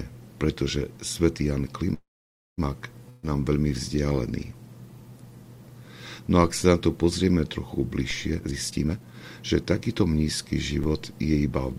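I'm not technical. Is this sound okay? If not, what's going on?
No, there are four kinds of problem.

Call audio freeze, 1.93 to 2.60 s: the sound stalls for about 0.64 s, with a brief fading buzz and then about 0.54 s of silence. This is likely from delayed network packets emptying the playback buffer. It then resumes exactly where it stopped, with nothing lost.

Burst of packet loss, 3.10 to 3.26 s: a run of network packets went missing, so the receiver stretched the last sound into a fading buzz or hiss. About 140 ms of the original sound is gone, and playback picks up beyond it.

DC step, at 6.44, 8.11 and 10.84 s: the waveform's resting level suddenly jumps, as when equipment recalibrates or an offset input switches in. Each jump is a low thump or click. The offset then fades away and the sound continues unaffected.

Jitter buffer speed-up, 8.31 to 10.10 s: too much audio had piled up waiting to play, so the receiver snipped out many tiny pieces, roughly 0.7 s in total. 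The sound runs about 36% faster at the same pitch and feels hurried.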